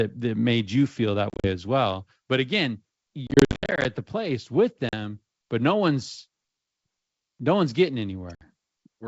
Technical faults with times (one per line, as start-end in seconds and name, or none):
1.30-1.48 packet loss on an ADPCM call
3.27-3.86 packet loss on an ADPCM call
4.89-4.94 packet loss on an ADPCM call
8.35-8.42 packet loss on an ADPCM call